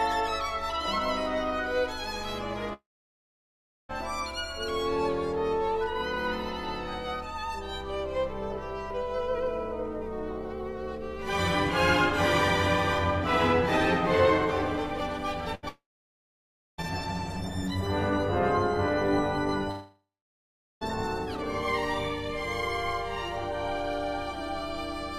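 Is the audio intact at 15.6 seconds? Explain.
No. There's a burst of packet loss from 15.55 to 15.65 s: about 80 ms never arrived, so the last sound gets stretched and fades before things jump ahead. Right after, from 15.69 to 16.80 s, a brief fading tail drops to near-silence for about a second, and roughly 1.1 s of audio is gone; that's likely a long network dropout.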